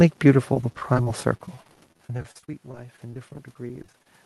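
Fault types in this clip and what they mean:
Low bit depth without dither: grainy distortion tracks the speech throughout, about 35 dB below it, roughest on quiet sounds; likely undithered rounding to roughly 8 bits.
Repeated packet loss (robotic sound): choppy speech from 0.53 to 4.06 s, with dozens of gaps up to 46 ms patched by stretching the preceding sound.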